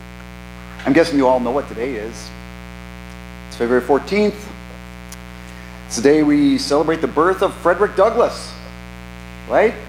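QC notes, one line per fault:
Throughout: mains buzz. Interference from a dimmer, rectifier or unshielded lead enters the path as sharp spikes twice per 60 Hz cycle, spreading harmonics of 60 Hz up into several kHz and laying a steady, raspy buzz roughly 20 dB below the sound.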